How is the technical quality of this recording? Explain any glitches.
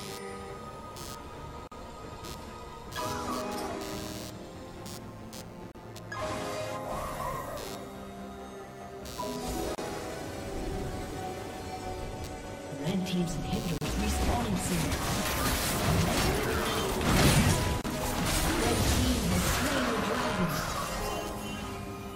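The recording has two technical problems: a computer-noise buzz throughout and short dropouts at regular intervals.

Computer activity noise runs the whole length. Changing processor and peripheral load disturbs the audio circuit's shared ground, so a buzzing pulse train of roughly a hundred pulses per second sits under the audio, around 20 dB below it, rising and falling with computer activity.

A gap at a join of encoded pieces appears at 1.67, 5.72, 9.75, 13.78 and 17.81 s, every 4 s. Separately encoded segments were joined with their start delay and end padding left in, so a silence opens, 42 ms at first and then 32 ms, with smeared edges before the audio resumes.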